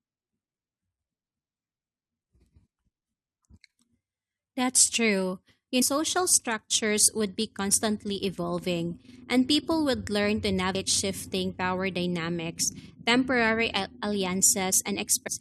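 Speech with damaged data in a compressed stream at 0.44, 5.81 (just before "structures would be constantly"), 10.74 and 15.26 s. Corrupted frames are misdecoded before the decoder resyncs.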